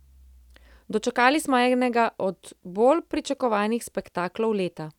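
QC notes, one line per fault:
No fault found in this speech clip.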